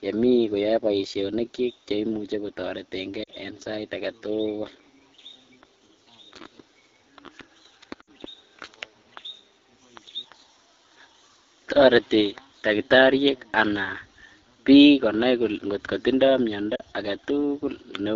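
Throughout the recording the speech carries the signature of the AMR wideband (HD Voice) codec at a low rate, with a rough, raspy texture that fits one of its two lowest modes, around 8.85 kbit/s. The codec models the voice below 6.4 kHz from a pulse excitation driving a vocal tract filter and replaces the 6.4 to 7 kHz band with shaped noise. At this rate the excitation is coarse, so the damage is plainly audible.

Lost AMR speech frames interrupt the audio three times. At 3.23 to 3.30 s, just before "en sait agetugul", about 40 ms is concealed. At 8.02 to 8.10 s the gap is about 60 ms. At 16.75 to 16.81 s another 40 ms goes missing. The lengths point to runs of two, three and two 20 ms frames that failed their checksum. In each gap the decoder repeats the last good pitch and vocal tract parameters while ramping the gain down. The result is a short smeared warble that dips toward silence, and the speech resumes briefly weak and rough.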